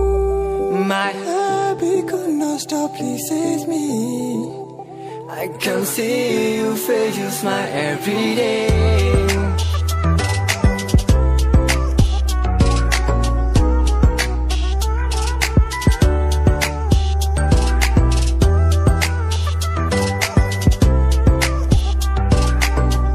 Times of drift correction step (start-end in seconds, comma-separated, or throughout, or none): 12.31-14.72